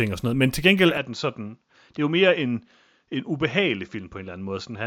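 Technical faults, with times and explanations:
0.98 s to the end, input switched to a poorer device: the speech abruptly turns duller and about 5 dB quieter, with nothing above 7.2 kHz and a faint new noise underneath. There's no gap at the change, likely a different microphone taking over.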